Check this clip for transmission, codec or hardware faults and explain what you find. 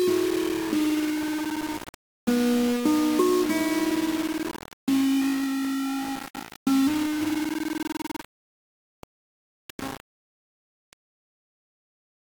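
One fault is present across the whole clip. It is low bit depth without dither. Samples sit on very coarse steps, likely just 4 bits, rounded without dither. The error tracks the sound, a grainy distortion only about 10 dB down. Quiet passages turn gritty or sputter.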